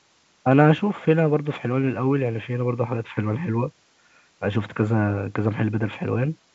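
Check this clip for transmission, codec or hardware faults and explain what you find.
No transmission, codec or hardware faults are audible here.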